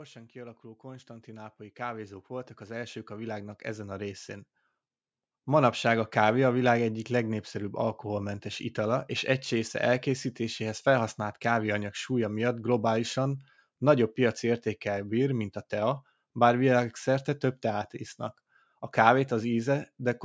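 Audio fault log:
0.12–4.56 s, automatic gain rising: the automatic gain control judged the incoming level too low and kept turning its gain up over these roughly four and a half seconds, adding about 16 dB in total. Because it works on the whole microphone signal, the voice and the background noise swell together in a slow, steady climb instead of a jump, so the speech grows louder and the room grows louder through the call-style band that stops around 8 kHz.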